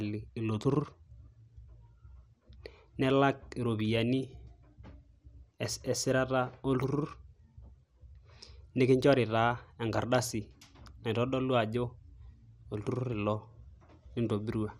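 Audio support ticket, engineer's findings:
Dull, gurgling, granular speech throughout the clip, with nothing above 15.8 kHz. Likely MP2 compression at a low bitrate, consistent with about 80 kbps. Mechanism: Layer II sub-band coding starves upper bands of bits, so they switch off or flicker and the remaining bands are coarsely quantised. Damage plainly audible across the whole recording, no clean stretches.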